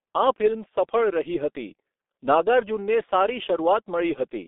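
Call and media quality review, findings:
Throughout: muffled, hoarse speech with blurred consonants. Heavy G.723.1 codec damage. Band limited to 250 Hz to 3.6 kHz. Coarse 30 ms frames, consistent with roughly 6 kbit/s.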